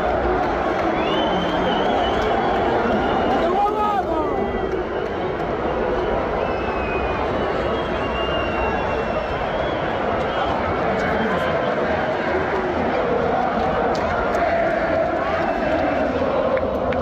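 No technical faults turn up anywhere in the recording. Nothing marks any point in the audio as going wrong.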